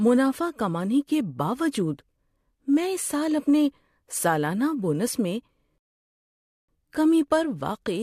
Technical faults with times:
5.78-6.69 rebuffering stall

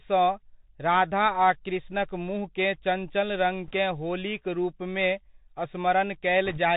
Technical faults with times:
0.00-6.77 Bluetooth CVSD headset codec
3.66-3.74 bit errors on a Bluetooth voice link
6.45-6.59 bit errors on a Bluetooth voice link

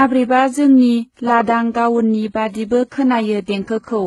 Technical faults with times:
0.00-4.06 transcoding between lossy codecs

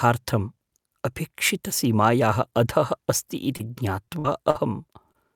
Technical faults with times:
3.57-3.61 short concealed packet loss
4.05-4.09 short concealed packet loss
4.19-4.26 burst of packet loss
4.50-4.57 short concealed packet loss
5.13-5.16 short concealed packet loss

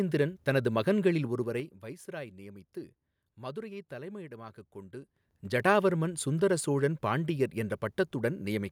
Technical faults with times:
1.19-1.96 zipper noise
4.95-5.63 zipper noise

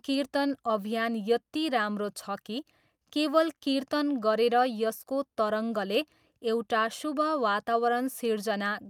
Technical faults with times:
none

